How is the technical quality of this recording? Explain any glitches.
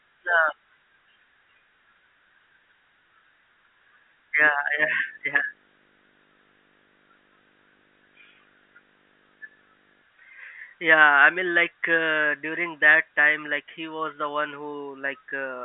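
The speech has one clear fault: a period of video or display buzz partway through. The speech itself comes over a telephone line, with nothing above about 3.7 kHz.

From 4.40 to 10.03 s, a 50 Hz buzz sits under the speech with hash above it. A whine near 15.6 kHz also appears. A screen or video cable is coupling into the audio path. The buzz follows the picture's 50 Hz field rate, and the whine comes from the line scan. It stays well below the speech, roughly 30 dB down.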